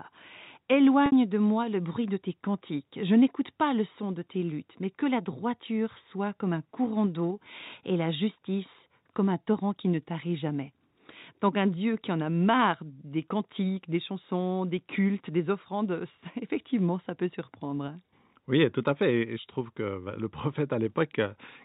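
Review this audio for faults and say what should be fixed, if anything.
At 1.06 to 1.12 s, just before "de moi le bruit", there's a packet loss with pitch repetition: about 60 ms went missing, which fits roughly three 20 ms packets, and the receiver filled it by looping the last pitch cycle and fading it out before the speech resumes over the narrowband G.711 line. A larger jitter buffer or forward error correction on the link would help prevent this.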